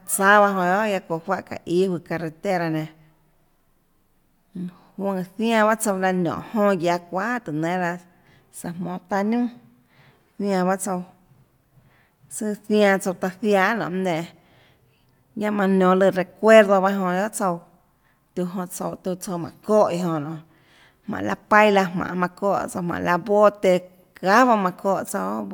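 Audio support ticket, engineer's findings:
No audible fault found on the speech recording; nothing for playback or capture to act on.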